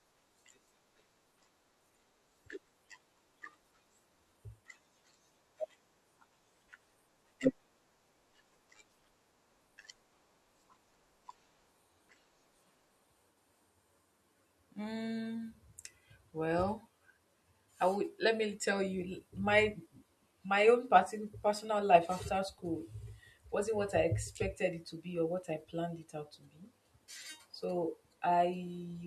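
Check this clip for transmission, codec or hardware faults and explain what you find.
Nothing in the transmission path, codec or playback hardware can be heard to affect the speech signal at any point in the recording.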